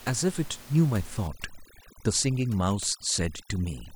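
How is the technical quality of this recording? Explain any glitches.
The recording has one processing fault, starting partway through; before it, room noise sits about 20 dB below the speech.

Overdone noise removal, from 1.27 s to the end: over-strong noise reduction cuts frequency bands near its noise estimate, along with quiet speech detail. The result is twinkling near-silence.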